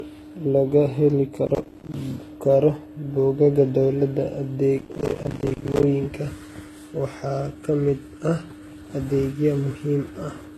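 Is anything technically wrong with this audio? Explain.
Yes. Throughout, the speech has smeared, swirly artefacts and nothing above 12.3 kHz, likely from transcoding between lossy codecs, which fits a low-rate HE-AAC encode re-encoded to Vorbis.

From 1.47 to 1.94 s and 4.79 to 5.83 s, processor overload crackle: dozens of missed buffers, each around 10 ms, drop to silence, producing gritty tearing.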